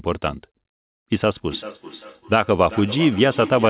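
From 1.49 s to the end, the speech returns as a feedback echo between two devices. One device replays the other's sound, and that microphone sends it back. The repeats come about every 0.4 s, peak about 15 dB below the speech and thin out. That fixed cycle marks it apart from room reverberation.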